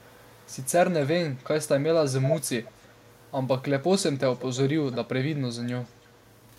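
Echo leak turns up four times: faintly at 0.02 to 0.67 s, loud at 2.23 to 3.3 s, a brief scrap at 4.92 to 4.97 s, and faintly again at 5.83 to 6.3 s. Each time a copy of the speech trails about 0.33 s behind, likely a loudspeaker's pickup the far end's echo canceller didn't catch.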